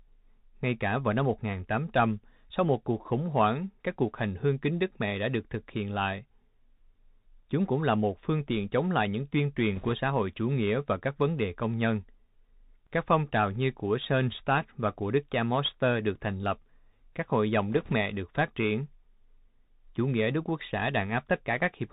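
Throughout, the speech sounds narrow and muffled, with scratchy s sounds over a granular hiss. This is the Bluetooth CVSD headset codec: nothing passes above 4 kHz, and its one-bit steps, consistent with a 64 kbps link, lag behind loud high sounds.

From 9.76 to 9.93 s, between "chống lại những tuyên" and "xã hội chủ nghĩa", a rushing crackle washes over the sound. It returns more faintly from 17.72 to 17.93 s, between "lập các hội dòng" and "mẹ được phát triển". These are bit errors on a Bluetooth voice link. The flipped bits each carry little weight, so they add crackle rather than loud clicks. The first burst is heavier, with roughly 3 percent of bits wrong, about twice the rate of the second.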